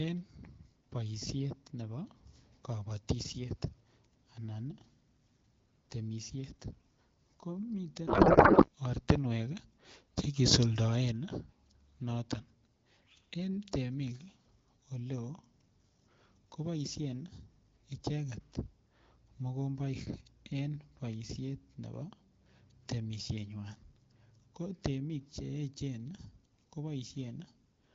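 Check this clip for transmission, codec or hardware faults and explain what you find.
One transmission fault stands out. From 8.07 to 8.69 s there is a codec payload misread. The AMR-WB frames seem to be unpacked with the wrong bit layout, which fits octet-aligned data read as bandwidth-efficient. The speech becomes garbled warbling noise that barely follows it. Loss concealment would fade or smear instead.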